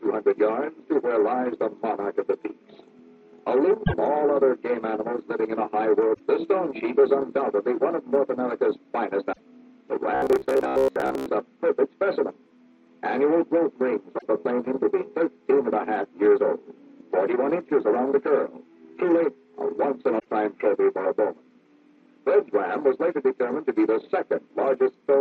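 Damaged data in a compressed stream at 3.83, 6.10, 9.29, 14.15 and 20.16 s: corrupted frames derail the decoder, which resyncs, leaving brief 0.1 s disruptions. Robotic sound from repeated short buffers at 10.15–11.26 s: a rigid 66.8 Hz buzz covering most of the stretch, likely from repeating roughly 15 ms buffers.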